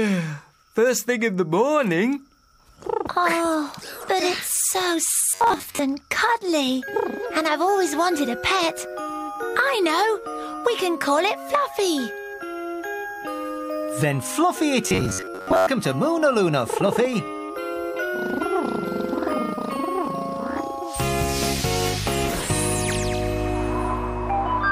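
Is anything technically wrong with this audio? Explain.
Yes. Robotic sound from repeated short buffers appears twice, from 5.30 to 5.79 s and from 14.84 to 15.67 s. In both stretches the sound turns into a rigid, metallic buzz fixed at 93.8 Hz that only loosely tracks the underlying audio. The likely cause is audio arriving too seldom, so a segment of about 10.7 ms is replayed over and over, covering most of each stretch while the real material is skipped.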